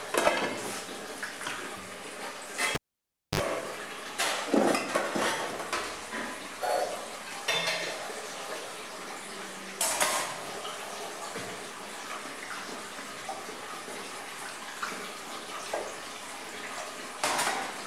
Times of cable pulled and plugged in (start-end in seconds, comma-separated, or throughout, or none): 2.75-3.40